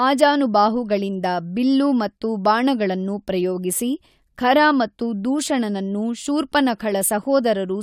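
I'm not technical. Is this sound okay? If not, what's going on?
Yes, nothing in this recording stood out as a problem when I listened to it.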